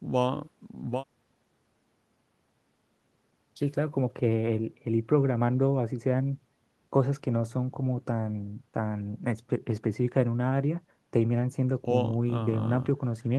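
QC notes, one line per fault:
Nothing stood out on listening.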